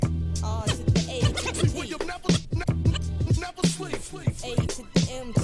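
No technical faults are audible.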